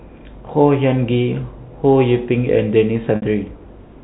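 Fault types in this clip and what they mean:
Packet loss with pitch repetition: a run of packets never reached the receiver, about 60 ms of audio, which fits three 20 ms packets. The decoder bridged the gap by looping the last pitch period it had and fading that copy out over roughly 50 ms. From 3.16 to 3.22 s the speech hangs on a brief, buzzy held tone that dies away, then returns through a short cross-fade, all within the narrow G.711 telephone band.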